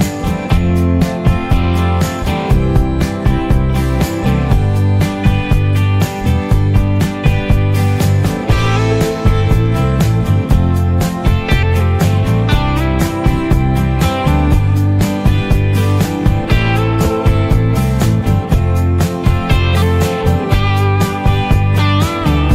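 Nothing stood out as a technical problem on listening to the recording.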